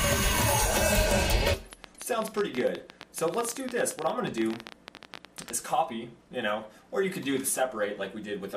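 A train of clicks, 1.73 to 5.51 s: around fifty uneven pulses at 14.9 per second, ticking well above the sound, likely nearby interference.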